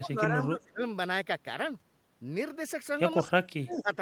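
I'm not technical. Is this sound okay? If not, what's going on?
No, not quite. There are two problems, both typical of speakerphone calls.

The first is speech suppressed in double talk. From the start to about 0.81 s, and again from 3.17 to 3.92 s, the voice dips and fades in patches. The second stretch sinks much lower. Most likely both people were talking at once, and the call's echo-cancelling system couldn't separate the real voice from its own loudspeaker sound, so it turned everything down.

The second is an echo leak. Between 0.62 and 0.68 s there's a very faint, brief copy of the voice arriving about 172 ms late, roughly a sixth of a second. This is likely the other end's loudspeaker being picked up by its microphone, with the echo canceller missing a small scrap that got sent back.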